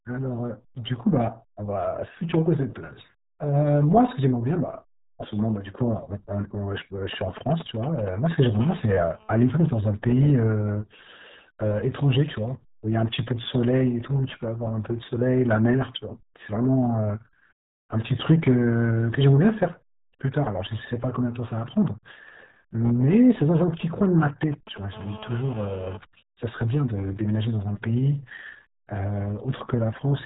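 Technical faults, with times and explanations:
Throughout: RealAudio 14.4 codec. Heavy 8 kbit/s speech coding removes everything above 3.8 kHz, leaving the speech muffled and gargly with a watery, smeared texture.
8.62–9.79 s: GSM phone buzz. A nearby 2G phone in a call pulses at 217 Hz; the audio circuit rectifies it into a steady, raspy buzz about 21 dB below the speech.
23.35–24.78 s: GSM signalling bursts. Short groups of 217 Hz radio bursts, rectified by the circuitry, produce a galloping pattern of short buzzes, roughly 15 dB below the speech.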